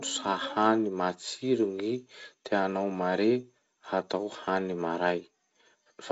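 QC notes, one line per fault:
No faults heard anywhere in this speech.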